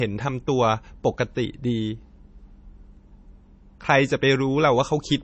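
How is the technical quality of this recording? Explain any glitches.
The technical quality is limited by one fault that runs through the whole clip. The speech sounds band-limited and carries low-bitrate artefacts, despite coming from a high-bitrate file.

From start to finish, nothing is present above about 8.3 kHz. The top octave is simply gone, and consonants lose their crispness. The likely cause is low-bitrate audio saved at a high bitrate. An MP3 at something like 32 kbit/s discarded that detail first. Re-encoding it at a rate around 256 kbit/s kept the loss and the cut-off. The larger file added nothing back.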